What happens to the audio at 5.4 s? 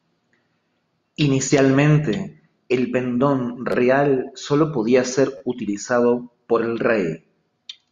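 A repeated buffer occurs from 5.38 to 5.41 s, between "solo podía ser" and "utilizado por el". New audio arrived late, so the last 10.7 ms piece played three extra times, which fits a 512-sample buffer. The hard joins make a brief buzz. Nothing seems skipped.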